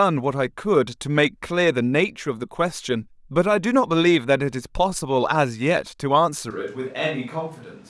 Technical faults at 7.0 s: switch to a distant microphone

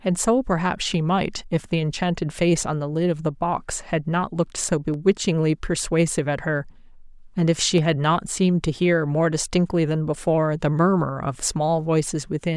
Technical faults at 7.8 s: dropped samples

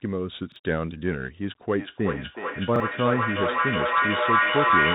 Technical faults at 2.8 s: Bluetooth CVSD headset codec; feedback echo between two devices; repeated buffer

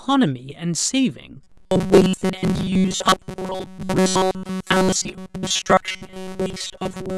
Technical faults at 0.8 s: none

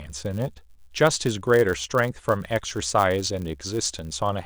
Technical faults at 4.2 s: filter restarted on every block

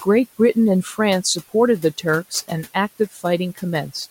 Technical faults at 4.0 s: none

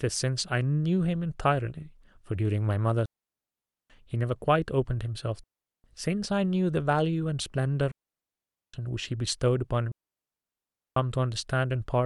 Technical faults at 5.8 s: digital wireless dropout

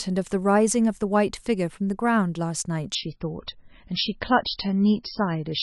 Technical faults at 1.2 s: none

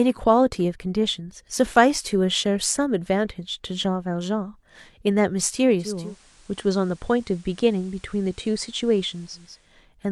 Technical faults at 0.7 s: none

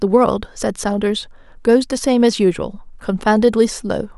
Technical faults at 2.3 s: clock slip clicks

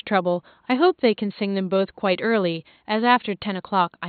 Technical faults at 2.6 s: dropped samples

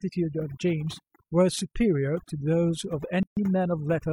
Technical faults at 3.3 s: overdone noise removal; gap at a join of encoded pieces

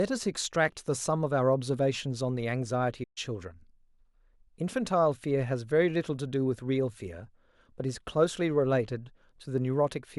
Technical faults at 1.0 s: none

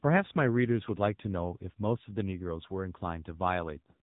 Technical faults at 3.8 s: AMR narrowband mobile codec

